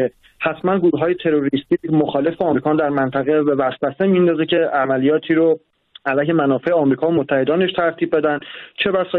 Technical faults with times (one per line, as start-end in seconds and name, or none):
2.50-2.56 compressed frames skipped
4.56 compressed frames skipped
8.38-8.41 corrupt frame decoded